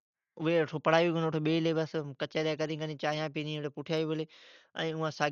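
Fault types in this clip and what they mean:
Dolby Digital compression: The speech sounds dull and rough, with nothing above 6.9 kHz, which fits a likely heavily compressed AC-3 stream near 48 kbps.
Clock slip clicks: A soft, regular rattle runs from 0.14 to 5.29 s, roughly every 0.05 s. Likely unsynchronised clocks about 400 ppm apart, slipping one sample each time.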